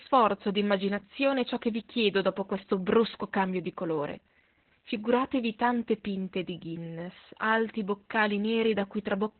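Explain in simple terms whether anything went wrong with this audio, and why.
Yes, something went wrong. From start to finish the speech sounds muffled, hoarse and somewhat robotic, like a poor phone line. The cause is heavy Opus voice compression. To save data, the coder threw away everything above about 4 kHz, which removes the crisp, bright part of the speech. It then rebuilt the rest from a rough model of the voice, and those coarse details produce the rasp and robotic quality.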